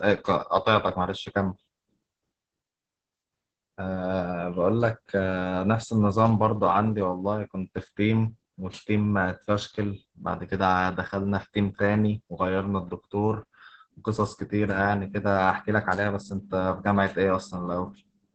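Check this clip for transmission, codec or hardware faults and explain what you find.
The clip carries one fault, present from start to finish: Opus voice compression, heavily applied. The speech sounds muffled, hoarse and faintly robotic throughout, with nothing above about 8 kHz. The coder is running in its SILK linear-prediction mode at wideband, which caps the band at 8 kHz, and the coarse, rough texture suggests the excitation is quantised very sparsely, consistent with a rate around 10 kbps in 20 ms frames.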